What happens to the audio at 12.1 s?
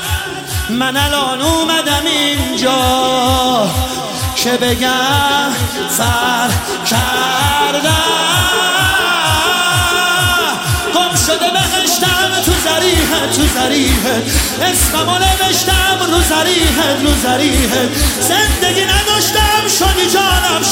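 Nothing goes wrong at 12.1 s; the audio plays through that moment intact, with no dropout, click, glitch or other fault to be heard.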